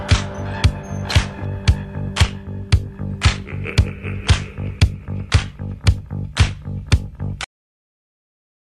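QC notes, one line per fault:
7.44–8.60 s, cut-off end: the sound stops mid-event at 7.44 s and drops straight into digital silence for the remaining 1.2 s with no decay or tail, because the final buffers were never written or played back, so the recording ends abruptly.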